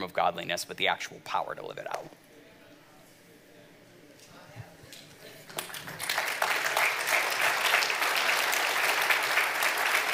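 No audible fault turns up anywhere in the recording, and nothing calls for attention.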